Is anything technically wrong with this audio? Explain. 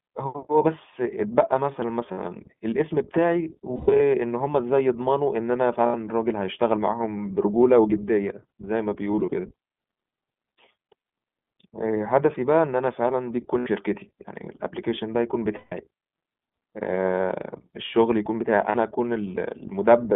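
Yes. Throughout the speech there is a thin, slightly rough and synthetic quality, with no bass below about 150 Hz and nothing above 3.6 kHz. This is the iLBC codec, a narrowband VoIP coder that codes each frame's excitation independently. The damage is plainly audible. The band limit strips sibilant air, and the excitation coding leaves the voice slightly rough and synthetic. The 20 ms framing fits iLBC's 15.2 kbps mode.

The speech also briefly turns into a held, buzzy or breathy vowel-like tone at 2.12–2.19 s, 3.76–4.01 s, 5.86–5.95 s, 9.12–9.34 s, 10.90–10.93 s, 13.58–13.69 s, 15.56–15.73 s and 18.70–18.76 s. These are lost iLBC frames. When packets go missing, the decoder repeats the last pitch cycle blended with noise. At 3.76 s and 9.12 s the gaps are scattered rather than continuous. Because each frame decodes alone, the voice is right again almost at once afterwards.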